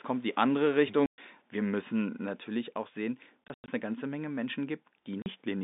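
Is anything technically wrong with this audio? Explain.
Yes. The speech has packet loss filled with silence at 1.06–1.18 s, at 3.44–3.68 s (160 ms lost in scattered gaps, longest 100 ms), and at 5.22–5.26 s. Dropped packets were replaced by silence, leaving hard-edged holes whose lengths fit 20 ms packets. These show as flat, empty gaps in the waveform and as blank vertical bands on a spectrogram, cut across the telephone band of about 200 Hz–3.7 kHz.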